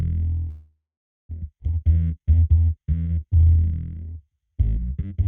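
At 0.49 s the sound stops and is held as a fading continuation of its last moment, falling to silence for roughly the final 0.47 s before resuming at 1.31 s. This call audio freeze, likely caused by packets arriving late and draining the jitter buffer, inserts about 0.8 s of gap while nothing is lost.

At 1.59 s playback skips ahead. Roughly half a second of audio is dropped, lost in transit or discarded by an overflowing jitter buffer while later audio was already waiting. The two sides are spliced almost directly, with only a few milliseconds of fill at the join, so the material jumps abruptly forward.

From 1.80 s to 5.14 s a jitter buffer slow-down stretches the audio to 85% speed with pitch unchanged. Repeated pitch periods and pause fragments add 500 ms to rebuild the buffer's reserve, drawing sounds out.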